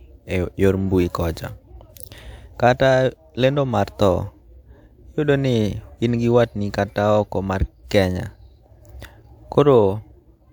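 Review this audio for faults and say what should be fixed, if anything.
No faults; nothing needs fixing.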